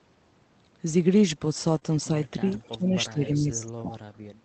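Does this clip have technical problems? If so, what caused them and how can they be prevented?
Yes. The clip is speech carried over a call path that limits the sound to about 8 kHz, and it has four kinds of fault.

Lost packet rebuilt from error correction, at 1.75–1.77 s and again at 1.83–1.85 s. In each case one 20 ms packet failed to arrive, and the decoder played the low-bitrate backup copy carried inside the following packet. The audio continues without a gap, but those frames sound briefly rougher and noisier. That continuity separates this fault from concealment, where the missing sound is guessed rather than decoded. Stronger in-band error correction, or a less lossy network route, would reduce these events.

Short concealed packet loss, at 1.79–1.83 s, between the two rebuilt packets. Here about 20 ms of audio had no backup copy. The receiver covered the hole by extending the preceding sound and then blending back into the real signal, which leaves a short smear or wobble. 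Unlike the rebuilt frames, this audio is extrapolated, so its detail can be wrong and not merely coarse. A larger jitter buffer and error correction sized for burst losses would help prevent it.

Speech suppressed in double talk, across 2.12–3.95 s, affecting around one and a half seconds of that span. The level drops by up to about 15 dB, with the sound dipping. This is most likely the echo canceller ducking the talker while the far side was also active. It is gain pumping tied to overlapping activity, not a network gap, because the audio keeps flowing but quietens. An echo canceller with better double-talk detection, or a headset on the talker's side, would avoid this.

Echo leak, at 2.50–2.69 s. A faint copy of the sound returns about 0.36 s late, at about 25 dB below the main signal. This is likely loudspeaker pickup that the far end's canceller failed to remove. The fixed delay and the repetition of earlier material distinguish it from reverberation, which would trail off smoothly rather than arrive as a separate copy. 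Headphones at the far end, or better-tuned echo cancellation there, would prevent it.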